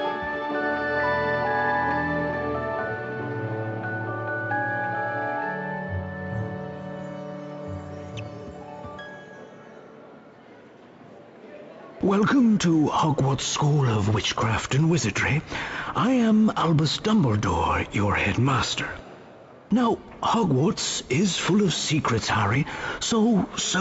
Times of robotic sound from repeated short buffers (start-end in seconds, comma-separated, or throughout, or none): none